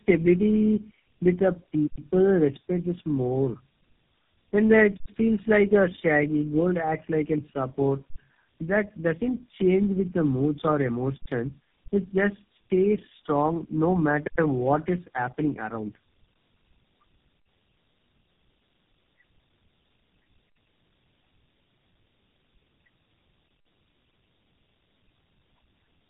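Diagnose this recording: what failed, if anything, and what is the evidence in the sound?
The failure is at the codec stage, as tandem speech coding. The call appears to have been decoded and re-encoded by successive narrowband speech coders, with the sound pointing to about three low-rate coders in a row, the last likely GSM full rate. Each coder models the previous one's errors as if they were speech, so damage compounds. Throughout the speech, the result is roughness, a muffled tone and a warbly character, with nothing above 3.7 kHz.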